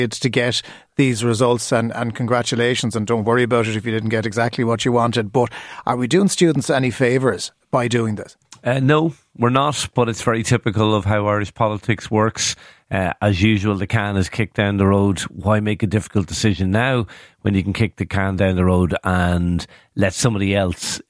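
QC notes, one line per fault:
No fault found.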